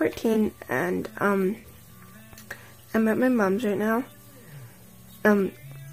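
At 0.33 to 0.37 s and again at 1.59 to 1.65 s (two frames there), a corrupt frame was concealed by the decoder.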